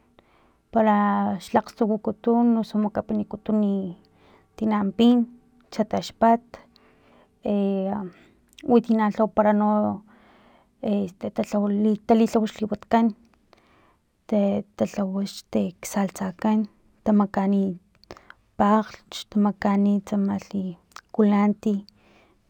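Throughout the speech, imaging from linear upsampling dulls the top end, which fits a rate raised from 22 kHz to 44.1 kHz by straight-line interpolation. A spectrogram shows a faint mirrored spectrum from 11.03 to 22.05 kHz, roughly 40 dB down, adding metallic shimmer to sibilants.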